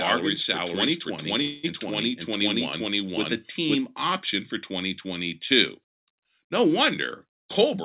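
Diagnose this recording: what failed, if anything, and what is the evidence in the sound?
The doubled audio track is already present when the clip opens. It runs from 0.00 to 3.76 s and ends abruptly just before "option for". A second full-band copy trails the original by roughly half a second at about the same level. It has no decay or room colour, so it is not an acoustic echo. The stage is capture or mixing. A slower second path, or an edit that keeps two offset copies, is the likely cause.

A call audio freeze occurs from 1.42 to 1.80 s, inside the doubled section. The sound stalls and is held as a fading continuation for about 213 ms. It then resumes where it stopped. Nothing is lost, but everything after it lands about 213 ms later. The stage is network and jitter buffer. Packets likely arrived late, the buffer ran dry, and the receiver filled the gap. The band stops at 4 kHz, which fits the G.711 mu-law call path.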